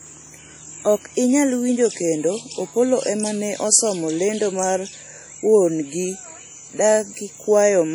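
Across the whole clip the speech carries heavy codec damage of the kind WMA compression leaves, likely from a WMA 1 encode at a low rate that fits around 32 kbps. Each long transform block smears its quantisation noise over tens of milliseconds, so consonants ring and the tail of each syllable goes washy. Quiet detail gets zeroed out, and there's a hiss that swells and sinks with the talker. The top end still reaches about 20.1 kHz.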